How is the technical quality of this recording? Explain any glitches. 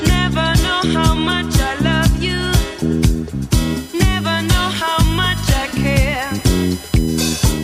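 A fixed-pitch USB whine sits on the sound from 3.57 s to the end: a 1 kHz tone, strongest at 5 kHz, about 20 dB below the signal, from bus current leaking into the power or ground.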